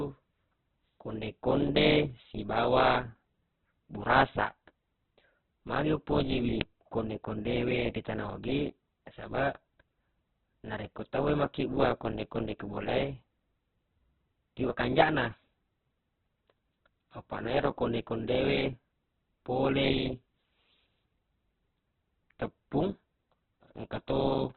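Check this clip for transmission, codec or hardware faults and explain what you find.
Two faults are audible. Throughout, the speech is band-limited and grainy. At 6.61 s there is a brief loud crack.

Opus compression: nothing sounds above 4.4 kHz. The speech is noisy and rough, which fits the likely cause: heavy Opus coding at a very low bitrate near 8 kbps.

Uninitialised buffer: just after "magi upoji wi", at 6.61 s, a very short, loud crack appears. Leftover memory was played as audio, which fits a 64-sample block.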